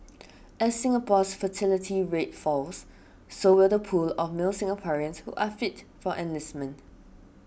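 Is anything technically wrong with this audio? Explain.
Yes. At 3.54 s the speech jumps, as if a sliver of sound, roughly 15 ms, vanished and the two sides snapped together with no gap. This is likely a dropped buffer (overrun), where the hardware overwrote samples before the program read them.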